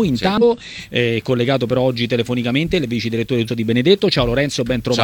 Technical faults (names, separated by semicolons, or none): damaged data in a compressed stream